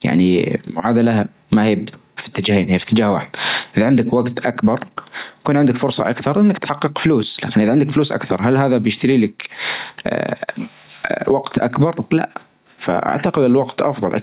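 Speech with gain pumping throughout: the level ducks by roughly 15 dB under each loud syllable. This is likely from gain set far too high into a fast limiter. On the waveform, the envelope looks flattened, with peaks squashed to one ceiling. The telephone-style call path leaves the spectrogram empty above 4 kHz.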